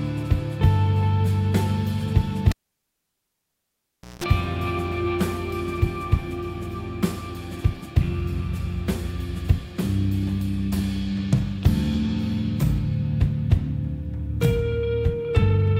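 At 2.52 s a cable gets pulled and plugged in: a pop, then about 1.67 s of near silence, then roughly 0.18 s of 60 Hz mains buzz as only the plug tip makes contact, and a second pop when the sound returns at 4.24 s.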